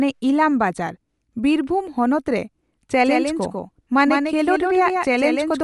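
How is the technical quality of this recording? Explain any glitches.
The technical quality is compromised by two faults.

Throughout, the speech has a grainy, breathy edge with nothing above 11.5 kHz, likely from Bluetooth LC3 compression, whose 10 ms transform frames at a rate fitting 48 kbps thin and noise-fill the treble.

From 3.05 s to the end, a doubled audio track begins abruptly: a dry copy of the speech, about 5 dB quieter, trails by around 150 ms, likely from a second, slower capture path mixed in.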